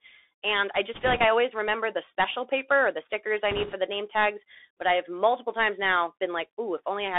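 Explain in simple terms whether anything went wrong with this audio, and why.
Bluetooth CVSD headset codec, throughout: the speech passes through the narrowband phone-style link a headset uses, so it sounds thin and muffled, with nothing above about 3.6 kHz. Each sample is coded only as a step up or down, leaving a grainy hiss underneath and scratchy s sounds.

Bit errors on a Bluetooth voice link, from 0.94 to 1.25 s (just before "I always remember the") and from 3.51 to 3.74 s (between "or the stickers I" and "the name tags"): a few percent of the transmitted bits flipped, adding a rushing, crackly noise rather than sharp clicks.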